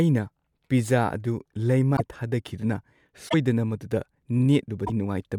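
A broken MP3 bit reservoir is the likely cause of three brief glitches in the speech, at 1.96 to 2.01 s, 3.28 to 3.34 s and 4.86 to 4.90 s, lasting about 52, 64 and 40 ms. Each spans roughly two or three 24 ms frames. After a cut in the stream, the next frame reaches back for reservoir data stored in earlier frames and decodes bytes belonging to a different frame, so the sound breaks up until decoding resynchronises.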